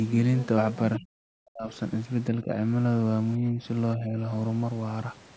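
Other side's voice leaking through appears at 0.95 to 0.99 s as a brief scrap of a second voice, roughly 10 dB below the main speech. It is too short to sound like more than a clipped fragment. The likely cause is a loudspeaker on the talker's device playing the far end back into the microphone, with the echo canceller leaving a residue instead of removing it completely.

Speech suppressed in double talk follows immediately, from 0.97 to 1.71 s. The talker's speech collapses by as much as 40 dB for most of that stretch, so it sounds largely cut away. Shallower dips recur at 2.34 to 2.54 s (about 10 dB), 3.38 to 3.60 s (about 5 dB) and 3.96 to 4.19 s (about 10 dB). Each one briefly pulls the level down. This is likely an echo canceller facing both sides talking at once and attenuating everything, including the wanted voice.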